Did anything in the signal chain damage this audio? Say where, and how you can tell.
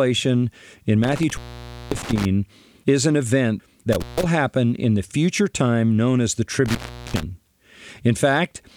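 Yes. Speech cuts out three times with crackle at the edges: 1.04 to 2.25 s before "is an event" (0.54 s open), 3.93 to 4.26 s (0.15 s), and 6.66 to 7.23 s after "time known as the" (0.39 s). This is intermittent contact in the analogue wiring, where a loose plug or cable briefly breaks the circuit.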